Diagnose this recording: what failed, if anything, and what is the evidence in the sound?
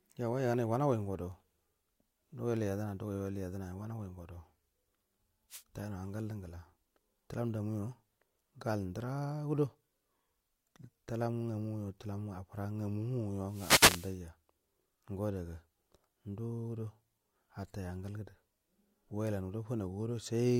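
The wireless link failed, the analogue radio hop before the converter. There's a wireless microphone noise hit, a quick swish of static at 5.50–5.63 s and a longer burst at 13.46–14.18 s. The FM signal faded as reflections cancelled, so receiver noise rose.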